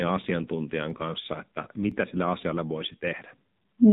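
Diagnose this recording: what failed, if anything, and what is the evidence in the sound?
Codec stage: the AMR narrowband mobile codec has stripped everything above 3.8 kHz, and the speech sounds buzzy and synthetic, which fits heavy compression around 6.7 kbps.

Buffer stage: overlapping chunks, one second apart, replay 12 ms of audio at 0.90, 1.92 and 2.93 s, each heard as a brief click or stutter.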